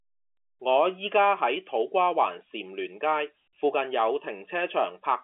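The speech has no technical fault: it sits in the normal G.711 telephone coding band of about 250 Hz to 3.4 kHz with nothing above 3.7 kHz, which fits a 64 kbps A-law telephone line.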